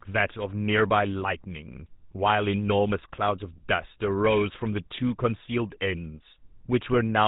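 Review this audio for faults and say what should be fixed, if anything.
The speech passed through the GSM full-rate codec for its whole length. The codec models the vocal tract as a filter and drives it with a coarse, regularly spaced pulse excitation, keeping only every third excitation sample. The damage is plainly audible: the speech has a buzzy, gravelly roughness and loses everything above 4 kHz, so it sounds dull and boxy. The sound fits a low bitrate of about 13 kbps. To prevent this, record or transcode to a wideband, higher-bitrate codec instead of routing the audio through a GSM telephony path.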